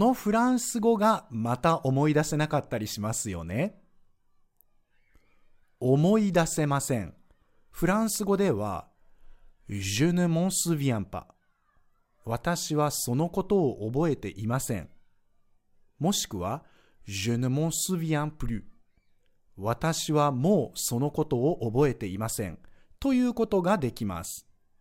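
No technical faults are audible.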